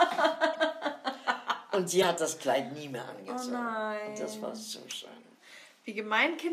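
Three short bursts break into the audio at 0.53 to 0.57 s, 2.02 to 2.04 s and 5.63 s. Each is a corrupt frame decoded. Damaged compressed data was played anyway, putting energy at wrong frequencies. The 2.02 s blip is loudest. The last is faint.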